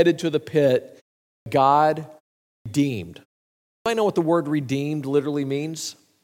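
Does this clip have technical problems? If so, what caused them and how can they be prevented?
Yes, there's a clipped start after a pause three times: at 1.31 s, 2.49 s and 3.70 s the speech jumps in abruptly, missing its first 150 to 170 ms. Each comes right after a short gap of 0.37 to 0.53 s, long enough for the output device to drop into sleep and need a moment to wake back up, so the opening sounds get swallowed. Disabling the device's power saving, or feeding it a constant very low-level signal so it never sees true silence, should keep it awake and stop this.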